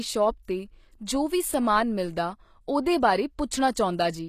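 HE-AAC compression runs throughout the speech and is likely the cause of the plainly audible damage. The lower spectrum is coded directly, and the upper bands are rebuilt by copying lower content upward, so s sounds come out gritty and metallic. Nothing remains above 14.9 kHz, which fits a bitrate around 24 kbps.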